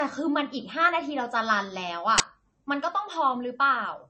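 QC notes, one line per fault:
throughout: low-bitrate audio saved at a high bitrate. The speech has nothing above about 8.3 kHz and keeps a smeared, swirly coding texture. This likely comes from a low-bitrate MP3 that was later re-encoded at a much higher rate, which cannot restore the discarded detail.
2.18–2.20 s: uninitialised buffer. A sudden, loud burst of harsh digital noise cuts across the speech for 20 ms. A playback block was sent out before any audio filled it, so stale memory contents were heard as samples.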